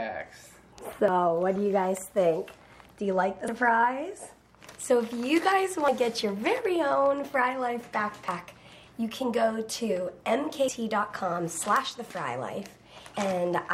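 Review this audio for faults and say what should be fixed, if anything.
Audio missing between chunks: the sound skips at 1.08, 3.48, 5.88, 8.28 and 10.68 s. Each time about a tenth of a second vanishes with no gap. The regular spacing likely comes from 2.5 s chunks losing their edges. Keep capture continuous across chunk boundaries.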